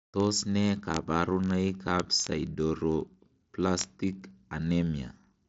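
Word clock ticks run through this speech from 0.11 s to 5.47 s, roughly every 20 ms, as an unlocked receiving clock, about 1000 ppm off, slips one sample each time. The sound is bandlimited near 7.7 kHz, which fits its path through an mSBC Bluetooth headset link.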